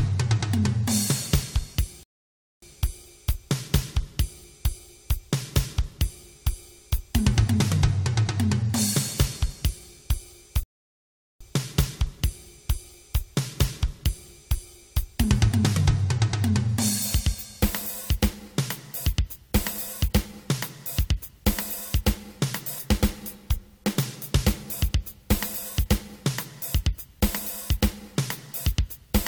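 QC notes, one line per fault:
2.03–2.62 s and 10.63–11.41 s, rebuffering stall: the playback runs dry, drops to dead silence for about 0.59 s and then 0.77 s, and picks up exactly where it left off. Nothing's missing, but those gaps stretch the timeline.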